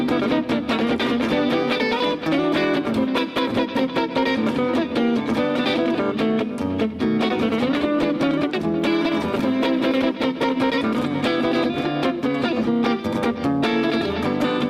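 A single skip at 9.39 s is the one fault in the audio, an overlap between stream segments. Two of the 6-second segments claim a few shared milliseconds, and the player trims that stretch away, so about 6 ms of real sound goes missing and the waveform jumps straight across the gap. That abrupt splice, with nothing inserted and no silence, is what separates it from a dropout, which would leave an audible hole.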